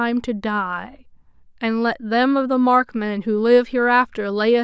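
Speech recording whose signal shows no audible technical fault at any point.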